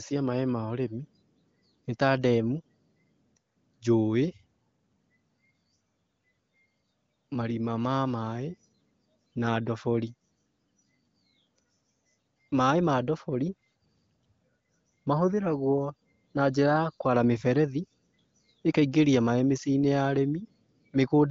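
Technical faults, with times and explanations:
Nothing stood out on listening to this speech clip.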